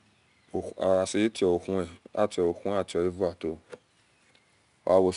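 From start to finish, the speech carries 4-bit ADPCM compression, and the damage is plainly audible. Each sample is coded as a small step from a predicted value, so the error rides with the signal: a gritty hiss swells on loud syllables and sinks in quiet gaps, unlike fixed quantisation noise. Nothing sounds above 10.6 kHz, pointing to a sample rate near 22 kHz and a rate around 89 kbps.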